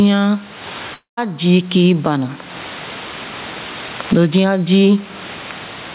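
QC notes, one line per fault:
Throughout: gain pumping. The room noise sits about 32 dB below the speech. The level difference between loud and quiet passages is squashed, with a swing of around 20 dB. The likely cause is input gain set far too high, with a fast limiter clamping it on every peak. On a waveform the gaps show a rising noise floor, and on a spectrogram the noise band visibly brightens between phrases and darkens under speech, within a spectrum that stops at 4 kHz.
0.94–1.19 s: long network dropout. The sound stops being real just before "zii kii bana". For the first part of the gap, the receiver stretches the last fragment into a buzz or hiss that decays, and about 0.15 s of near-silence follows. Speech then resumes at "zii kii bana" with about 0.24 s of audio never heard. The likely cause is a run of lost packets. A spectrogram shows a smeared, repeating harmonic pattern fading out, then an almost blank band before the speech returns. 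On the waveform the envelope tapers to flat.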